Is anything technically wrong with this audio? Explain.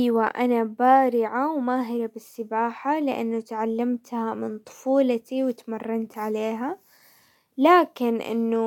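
No, the signal shows no technical faults anywhere in the recording.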